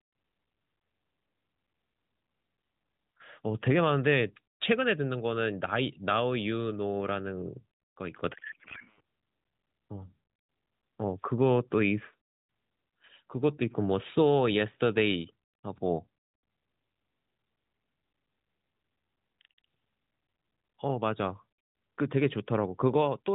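It's a speech clip carried over AMR narrowband, with the usual 4 kHz ceiling and a faint buzz. From 8.34 to 9.01 s it hits a codec payload misread, and the speech turns into garbled warbly noise that barely tracks it. That sounds like octet-aligned AMR frames being parsed as bandwidth-efficient, so every field lands in the wrong spot.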